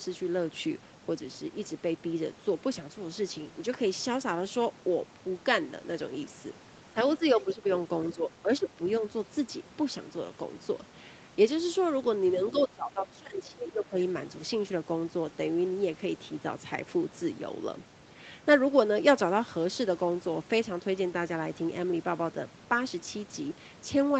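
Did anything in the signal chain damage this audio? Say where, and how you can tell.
Yes. The speech dips and thins in brief patches at 6.93–6.97 s, 7.18–7.67 s and 8.15–8.79 s, then sinks about 20 dB from 12.52 to 13.97 s. This is speech suppressed in double talk, likely the call's echo canceller turning the talker down while the far side spoke.

At 12.48 s a faint second voice, around 20 dB below the talker, slips through just before that long dip. This is the other side's voice leaking through, likely loudspeaker echo that call processing did not fully remove from the microphone signal.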